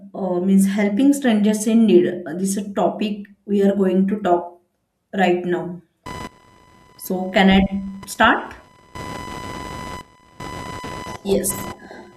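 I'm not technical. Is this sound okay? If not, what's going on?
No. From about 6.06 seconds, just after "right now", a high-pitched buzzing whine, pulsing roughly a thousand times a second, sits fairly loudly under the speech until the end. This is computer activity noise: the computer's changing workload is leaking electrically into the audio.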